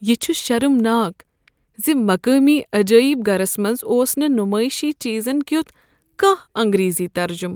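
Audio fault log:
No fault is heard in this speech clip.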